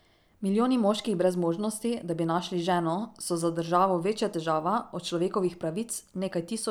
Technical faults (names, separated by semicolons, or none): none